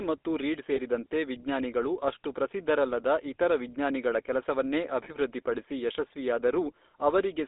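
The whole clip carries the GSM full-rate codec. The speech sounds buzzy and gravelly, and the band runs only from 250 Hz to 3.7 kHz, which fits a 13 kbps full-rate link. At 0.76 s, between "ಮತ್ತು ರೀಡ್" and "ವಿಜ್ಞಾನಿಗಳು ಅಷ್ಟು ಪ್ರಸಿದ್ಧರಲ್ಲದ ಇತರ", and again at 5.04 s, there are lost GSM frames. Each gap is about 20 ms of missing signal, filled by repeating the previous frame. Both sound like a brief metallic ring.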